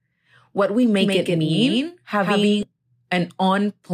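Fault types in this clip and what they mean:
Doubled audio track: Right after "what we", from 1.01 s to 2.63 s, the speech is heard twice, with a second full-band copy trailing by about 150 ms at roughly the same loudness as the original. This is likely a second capture through a slower path, or two out-of-step copies left in an edit. Unlike an echo or reverb, the copy has no decay or room colour, and it switches on and off abruptly.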